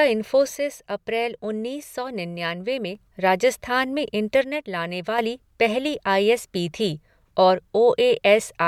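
From 0.55 to 2.95 s and 4.44 to 5.19 s, before "पहली आई एस पी", speech abruptly falls about 6 dB, likely one channel dropping out.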